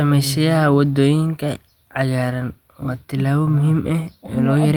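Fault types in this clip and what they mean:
Clock drift between sender and receiver: The sending clock runs about 2 percent slow against the receiver's, so the jitter buffer keeps draining throughout the speech. On a waveform this appears as small timing seams at uneven intervals rather than any single obvious break.
Repeated timing corrections: From 0.39 to 4.59 s the receiver repeats short pieces to fill the gap, stretching the speech to 98% speed and adding about a tenth of a second. A spectrogram shows duplicated slivers and slightly lengthened harmonic patterns at irregular spacing.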